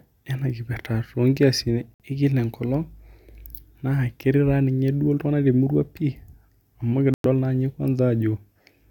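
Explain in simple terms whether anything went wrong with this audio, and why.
Two brief dropouts point to a Bluetooth stall, likely caused by wireless interference holding back data until the headphones ran out of stored audio. The speech cuts to silence for 58 ms at 1.94 s and about 0.1 s at 7.14 s, then carries on.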